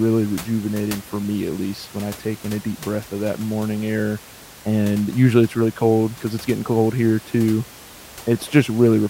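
Nothing here points to a problem with the system: the only thing underneath the speech is some room noise from where the microphone sits, about 20 dB down, and that's just part of the recording.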